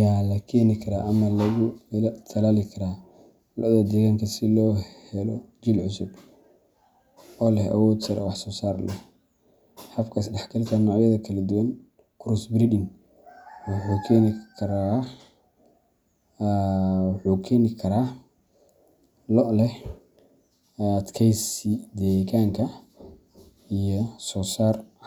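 No technical faults can be heard anywhere in this speech recording, and the signal stays intact throughout.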